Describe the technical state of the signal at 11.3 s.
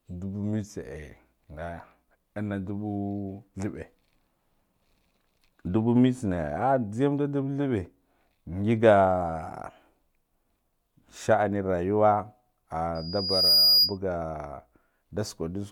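At 11.3 s the speech signal is intact, with no audible dropout, distortion, clipping or other fault at that moment.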